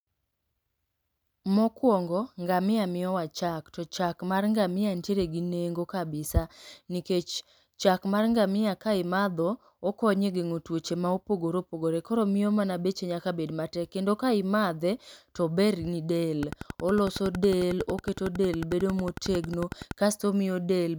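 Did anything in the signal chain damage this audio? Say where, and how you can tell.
Yes. A train of clicks runs from 16.43 to 19.92 s: around forty near-identical pulses, evenly spaced at 10.9 per second, standing roughly 10 dB above the speech and audible in the pauses too. That steady, content-independent ticking likely points to electrical interference in the analogue wiring, not codec or network dropouts.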